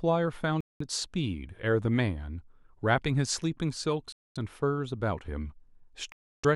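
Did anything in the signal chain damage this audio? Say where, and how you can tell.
Yes. The speech drops to dead silence three times: at 0.61 to 0.82 s for about 0.2 s, at 4.12 to 4.37 s for 0.23 s, and at 6.12 to 6.45 s for 0.31 s. These are likely Bluetooth stalls at the wireless playback link. Radio interference delayed packets, the headphone buffer emptied, and output halted until retransmitted packets refilled it, leaving gaps of pure silence.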